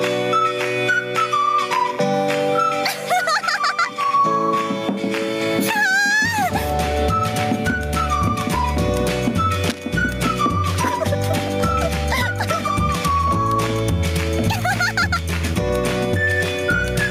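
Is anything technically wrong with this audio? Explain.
Yes, there are two faults. Gain pumping runs through the whole clip. The gain ducks by around 10 dB under each loud sound. This likely comes from input gain set far too high, with a fast limiter clamping down. Loud and quiet parts sit squashed together.

Cable scratch noise appears from 9.67 to 9.85 s. It is a dense, uneven burst of scratchy rustling, only a little below the main sound. A worn cable or connector being moved, changing its contact resistance rapidly, is the likely cause.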